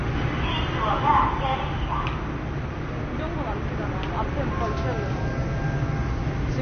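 A recording of everyday sounds carries plainly audible MP3 compression artefacts for its whole length: a watery, swirling texture and smeared attacks, with nothing above 6.4 kHz. On a spectrogram this shows as a hard ceiling and flickering gaps, likely from a very low bitrate around 32 kbps.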